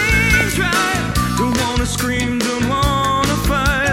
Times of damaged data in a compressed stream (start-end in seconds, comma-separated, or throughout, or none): none